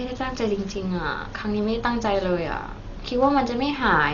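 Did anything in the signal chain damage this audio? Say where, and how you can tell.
Yes, at the codec stage, throughout the speech: nothing reaches above 6.9 kHz, and a rough, fluttering dither-like noise clings to voiced tones. That pattern likely points to heavy Dolby Digital compression at a low bitrate near 40 kbps, with the decoder filling unfunded frequency lines with noise, unlike a plain low-pass, which dulls cleanly.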